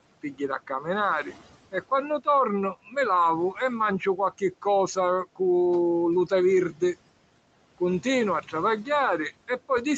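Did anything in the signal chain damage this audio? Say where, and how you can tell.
Yes. Overdone noise removal in the call processing runs throughout: near-silent background with twinkling specks. Unlike the codec's steady 8 kHz band limit, bands vanish individually.

Speech cut by the noise suppressor occurs from 2.86 to 2.96 s, dipping about 10 dB. That brief swallowed stretch is speech mistaken for noise, not a dropout, since the signal fades rather than stopping.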